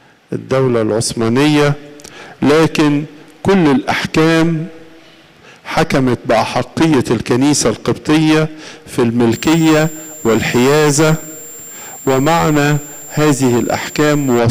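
From 9.32 s to 14.39 s a switching supply whistle sits over the audio, a thin high tone around 7.3 kHz, roughly 20 dB below the main signal. A switching power supply is running in an audible burst mode or beating with another supply, so its switching energy lands in the hearing range. Unlike a steady CRT whine or fixed test tone, its pitch is not locked: it wanders between about 7.30 and 7.38 kHz.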